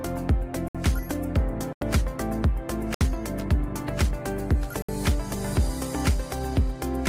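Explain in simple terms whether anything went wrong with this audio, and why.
Four brief dropouts cut the sound out completely: at 0.68, 1.73, 2.94 and 4.82 seconds. Three last 64 ms and one about 85 ms. Each is a block of digital silence, most likely where the program didn't deliver audio in time and filled the gap with nothing.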